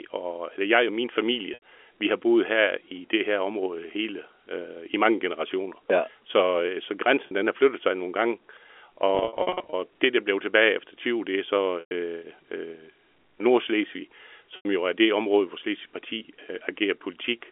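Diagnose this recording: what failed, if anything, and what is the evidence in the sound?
Packet loss in the network, bridged by repeating the last pitch period: at 1.54 s (80 ms), 7.27 s (40 ms), 11.8 s (110 ms) and 14.56 s (90 ms) the sound holds on a buzzy, fading repeat, and 9.15 to 9.73 s has scattered gaps up to 50 ms.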